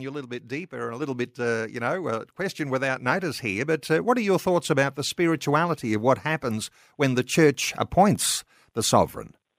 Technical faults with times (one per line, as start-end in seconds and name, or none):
1.02 microphone volume stepped up